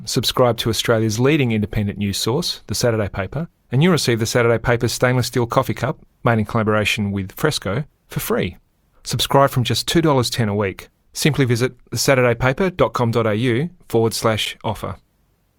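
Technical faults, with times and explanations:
14.45 s, gap between stream segments: segment timestamps leave an 8.5 ms silent hole; the waveform flatlines between hard edges, showing as a thin blank vertical stripe on the spectrogram.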